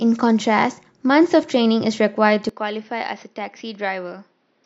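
The recording's input likely switched to a poorer device partway through this speech clip, at 2.49 s, and stays on it to the end. From that point the band is cut off at about 6.1 kHz, so the sound turns dull and boxy. The level drops by about 10 dB, and a faint new background noise appears, about 40 dB below the signal. The change happens instantly, with no gap of silence at the switch.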